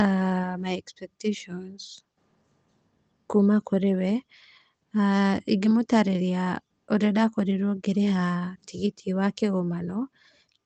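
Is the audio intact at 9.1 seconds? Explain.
Yes, the speech at 9.1 seconds is intact, with no fault at that moment.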